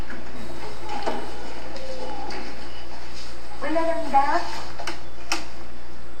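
A DC offset runs through the whole clip. The waveform sits shifted off zero by about -18 dBFS. It can't be heard, but it eats headroom and adds steady energy at 0 Hz.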